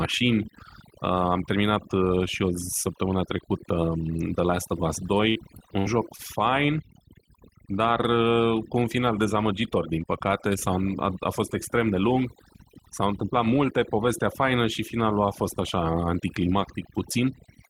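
Speech runs for the whole clip with its background reduced to twinkling, warbling specks, and quiet parts of the voice thin out. That is overdone noise removal: the reduction pushes individual frequency bands down or off whenever they sit near its noise estimate, taking low-level voice detail along with the noise. From 5.29 to 6.22 s the sound turns choppy and robotic, with pieces missing. This is repeated packet loss: five gaps in quick succession, the longest 63 ms, each patched by extending the previous sound, so about 164 ms (18% of that stretch) is concealment rather than real audio. Between 11.83 and 12.05 s the speech briefly hurries at about 114% speed while its pitch stays the same. That is a jitter buffer speed-up: the receiver trimmed short pitch-period pieces, around 40 ms in all, to cut excess buffered delay.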